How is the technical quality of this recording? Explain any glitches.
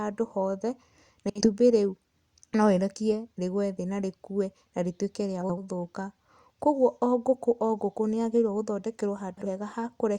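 Three brief glitches mar the speech, at 1.30–1.48 s, 5.41–5.62 s and 9.37–9.46 s. Each is a garbled flutter: frames out of order. Two neighbouring runs of about 60, 80 and 40 ms were swapped, so each stretch plays with its halves reversed, and no time is lost.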